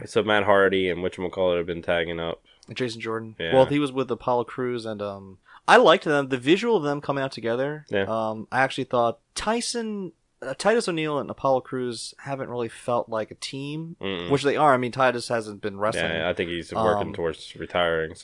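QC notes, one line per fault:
No technical faults turn up anywhere in the speech recording, and the signal needs no correction.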